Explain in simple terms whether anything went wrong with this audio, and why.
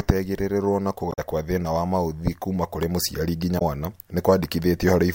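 Two short glitches break into the speech, from 1.09 to 1.19 s and from 3.55 to 3.62 s. Each is a brief glitch lasting well under a fifth of a second. The cause is damaged data in a compressed stream. Some bytes of the compressed file were corrupted. At those moments the decoder misread the broken frames and lost its place. It recovered when it found the next clean frame.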